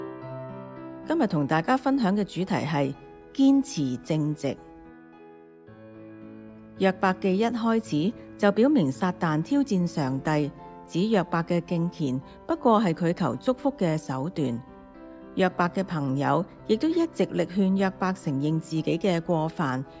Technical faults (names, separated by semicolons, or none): none